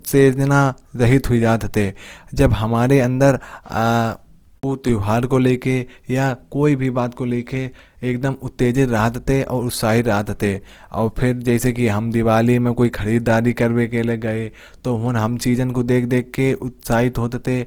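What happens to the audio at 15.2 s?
At 15.2 s the speech sounds grainy and rough, with noisy texture where tones should be clean; this runs through the whole clip. The likely cause is Opus compression in its music mode at a low rate around 24 kbps, filling starved bands with folded or noise content.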